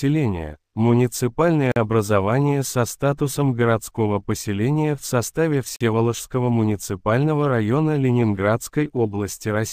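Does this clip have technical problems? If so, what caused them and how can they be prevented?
Yes. There are two gaps between chunks, at 1.72 to 1.76 s and 5.76 to 5.81 s, each a 44 ms hole, spaced 4.0 s apart. This fits audio delivered in 4-second chunks with silence inserted at each join, likely from codec padding or late chunk playback. Unlike a dropout, no sound is missing: it stops and resumes exactly where it left off. Trimming the padding and scheduling chunks back to back prevents it.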